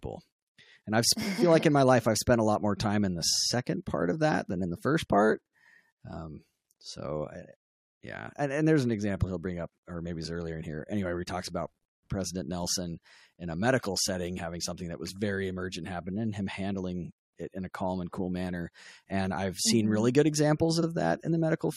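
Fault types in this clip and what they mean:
Repeated frames: a short chunk of compressed audio gets played twice near 20.82 s, a 46.4 ms stutter that makes the speech about 46 ms longer.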